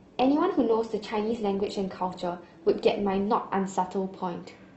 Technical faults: adaptive stream starting at a low bitrate

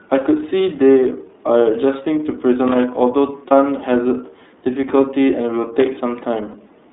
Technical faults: iLBC codec; lost iLBC frames; loose connector crackle

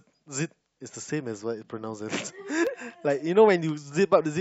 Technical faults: periodic USB or driver dropouts

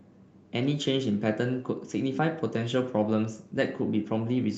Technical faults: none

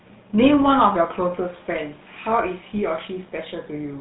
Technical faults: GSM full-rate codec

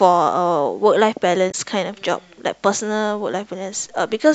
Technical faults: damaged data in a compressed stream

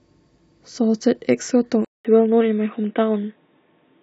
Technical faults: input switched to a poorer device

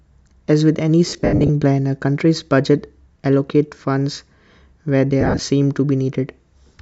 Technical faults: lost LE Audio frames

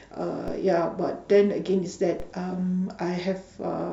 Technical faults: DC step

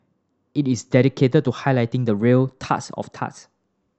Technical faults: drift correction step

